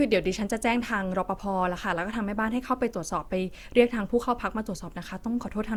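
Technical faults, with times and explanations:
Throughout, generation loss: the speech has likely been decoded and re-encoded about three times with a lossy codec, and the character fits Opus at 64 kbit/s. Each pass quantises the signal again on a shifted frame grid, so coding noise from every generation stacks up. The result is a swirly, smeared, hollow tone worse than that bitrate alone would give, with consonant attacks blurred, even though the band still extends to about 20 kHz.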